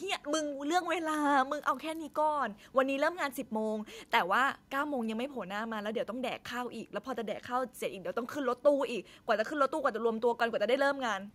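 Computer activity noise runs through the whole of this speech recording: a faint, pulsing buzz repeating at somewhere around 500 times a second, sitting very low, roughly 45 dB beneath the voice. It rises and fades with the machine's workload rather than with the speech. As the processor, graphics card or mouse draws varying current, the ground shared with the audio circuitry shifts, and those fluctuations leak straight into the recorded signal.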